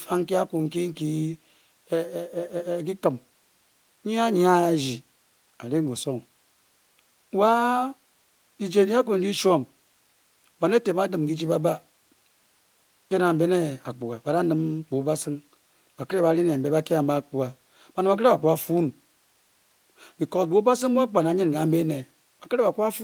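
Nothing in this speech recording points to a technical fault, so there's nothing to walk through here.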